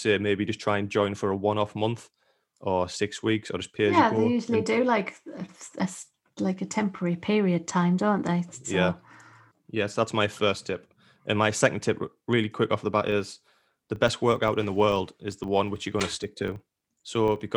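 From 13.08 s to the end at 17.56 s, the speech picks up a filter restarted on every block: the filter loses its state each block and restarts from silence, so each block opens with a small click, about 25 per second, forming a buzz that rises and falls with the level.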